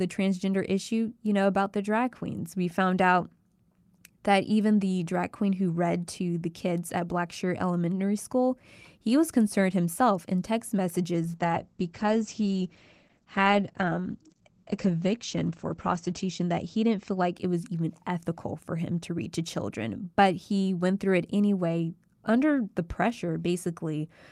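From 11.24 s, just after "concerned himself in text", the speech turns rough and muffled until 17.5 s, before "even ethical for him". This is a call bitrate drop: the encoder fell from 40 to 10 kbps for about 4.7 s, narrowing bandwidth from 20 kHz to 8 kHz.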